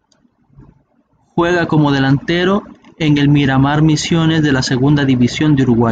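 No technical faults can be heard at any point in the recording.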